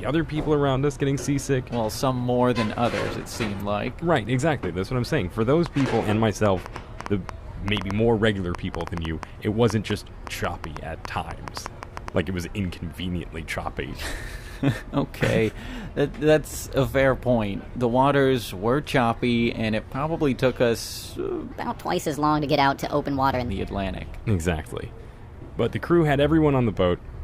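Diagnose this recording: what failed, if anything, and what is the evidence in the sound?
A train of clicks runs from 5.66 to 12.09 s: around thirty near-identical ticks at about 5 per second, unevenly spaced, sitting well above the material at roughly 10 dB over the signal and audible in the quiet gaps too. That steady, repeated shape points to the analogue wiring stage, likely interference from nearby equipment or a marginal interface coupling the same pulse into the line over and over.

Between 21.51 and 23.50 s there's a section at the wrong speed. That stretch runs 1.29 times fast, so it sounds hurried and sits about four semitones higher, then drops straight back to normal pitch and pace. Because speed and pitch shift together and abruptly, this is a clock mismatch at the playback or editing stage, likely a chunk resampled or played against the wrong rate.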